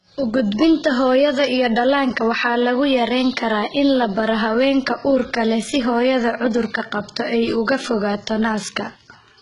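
Throughout the speech, s sounds turn gritty and metallic. A spectrogram shows blocky, repeated-looking treble ending sharply at 11 kHz, likely heavy HE-AAC compression, which fits roughly 12 kbps.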